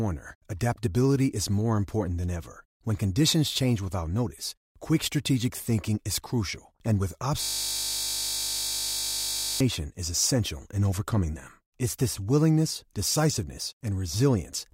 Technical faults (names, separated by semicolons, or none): system hang loop